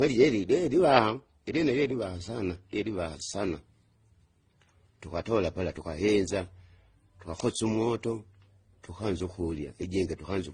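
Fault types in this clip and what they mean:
Transcoding between lossy codecs: the speech was likely encoded at a low bitrate and then re-encoded twice more, each stage spending bits on the previous stage's damage and adding its own, so layered artefacts from the different codecs sound together and nothing remains above 9.7 kHz.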